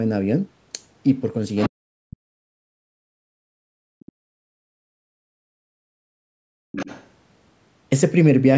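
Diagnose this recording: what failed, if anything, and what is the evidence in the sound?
Other side's voice leaking through, at 1.56 to 1.69 s and 6.72 to 7.07 s, points to the call processing stage. A second voice sits around 10 dB below the talker. This is likely residual echo: the device's loudspeaker played the far end, and the echo canceller left part of it in the microphone signal. On a spectrogram, a faint second set of harmonics overlaps the main ones.

Speech suppressed in double talk runs from 1.69 to 2.99 s and again from 3.65 to 4.74 s, immediately after the first leak. The talker's level falls by as much as roughly 40 dB, for about a second and a half and then about a second. The likely cause is the canceller failing to separate the talker from the echo and attenuating both. The spectrogram shows the talker's energy dropping, below the normal 8 kHz ceiling of the call path.

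Background gated by the echo canceller appears as a brief 0.1 s hole at 3.27 to 3.37 s and a long one from 5.02 to 6.72 s, with drops of about 40 dB and about 39 dB. Here the canceller clamped the microphone while the loudspeaker was active, so the room noise itself vanishes and then returns when it releases. On a spectrogram, the noise floor goes abruptly dark across all frequencies. On the waveform, the low-level background flattens to near silence between sharp edges.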